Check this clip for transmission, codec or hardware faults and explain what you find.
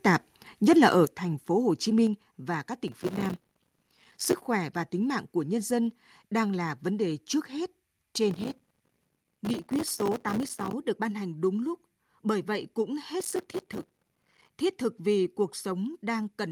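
The speech has two kinds of fault: two sudden level drops early on, and three bursts of processor overload crackle.

Microphone volume stepped down: at 1.05 s the whole signal, speech and background alike, drops by about 6 dB in one step, and at 2.07 s it drops again by about 4 dB. The likely cause is call software judging the microphone too hot and cutting the device's input gain, so the level falls abruptly and doesn't recover.

Processor overload crackle: from 2.88 to 4.46 s, 8.31 to 10.73 s and 13.20 to 14.52 s, a gritty tearing crackle rides on the speech. The processor is failing to finish its audio buffers on time, over and over. Each late buffer is replaced by a short gap of silence, and the hard edges of those gaps produce the crackle. The texture suggests buffers of about 3 ms, with hundreds of deadlines missed in each burst. The crackle stops once the load eases.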